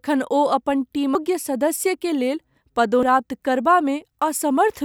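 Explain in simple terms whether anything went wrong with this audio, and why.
Yes, something went wrong. Compressed frames were skipped: the file stores the sound in short chunks, here about 85 ms each, and some chunks were missing or rejected by the decoder as damaged. The speech therefore jumps forward at 1.15 s, losing a bit under half a second, and again at 3.03 s, losing about half a second.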